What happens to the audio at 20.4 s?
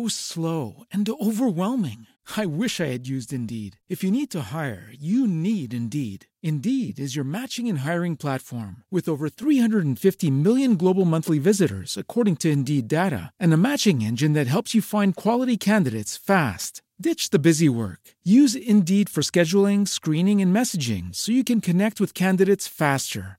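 At 20.4 s the audio is still inside a sudden gain jump that began at 9.43 s and runs to the end. Speech and background noise sit together about 6 dB louder, likely from a gain change applied without a ramp. The instant step with a raised noise floor sets it apart from gradual level drift.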